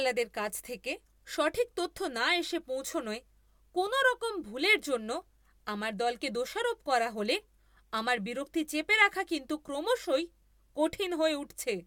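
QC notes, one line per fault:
No faults were heard on listening to this speech recording.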